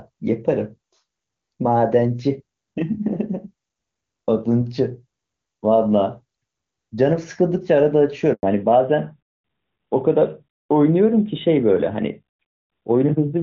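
At 8.33 s the speech cuts out for 100 ms, until 8.43 s. This is a handover gap. The call switched networks and no speech frames arrived meanwhile. The sound fades within milliseconds, then silence. Whatever was said then is lost.

From 8.43 s to the end, the call falls back to narrowband. Before this, the HD Voice codec sounds clean, which fits its top rate. After it, nothing above 4 kHz remains. The speech turns duller and rougher, which points to AMR-NB at 12.2 kbit/s.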